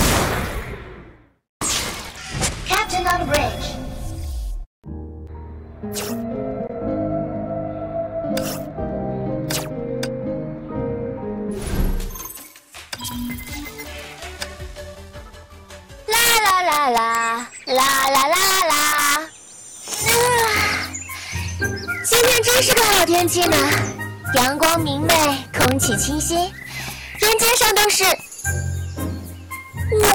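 Integer overflow runs throughout: driven about 6 dB too hot, roughly half a percent of samples wrap to the opposite sign, giving sharp cracks, seen as polarity-flipped spikes and broadband vertical streaks.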